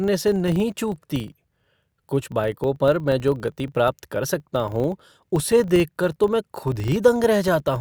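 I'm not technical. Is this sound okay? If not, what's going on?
No. Across the whole speech clip there is a steady buzz made of rapid ticks, about 25 per second. This is a filter restarted on every block: the processing handles the audio in short chunks, which fits chunks of about 40 milliseconds, and forgets where it left off each time. Each chunk starts from silence with a tiny jolt, so the buzz gets louder when the speech gets louder and fades in quieter moments.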